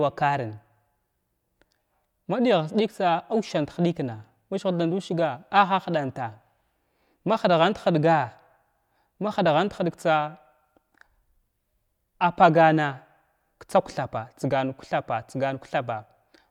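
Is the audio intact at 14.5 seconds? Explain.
Yes, the audio is intact at 14.5 seconds, with no audible fault at that moment.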